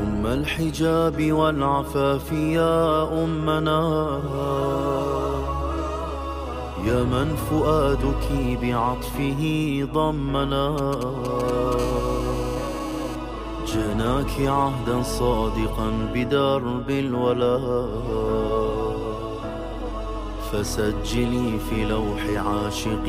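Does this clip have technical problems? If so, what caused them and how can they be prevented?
Yes. From 10.78 to 11.74 s there are GSM signalling bursts, roughly 10 dB below the signal: a nearby 2G phone's short radio bursts at 217 Hz, rectified by the audio circuit into a galloping dit-dit-dit of ticks and brief buzzes. On a spectrogram they show as broadband vertical stripes. Keeping phones away from the equipment, or switched off, prevents this.

From 11.79 to 13.16 s a steady GSM phone buzz follows, about 16 dB below the signal, as the phone moves into a call and transmits in bursts 217 times a second. The waveform shows a regular pulse train, and the spectrogram shows evenly spaced harmonic lines. Using shielded, balanced cabling also prevents it.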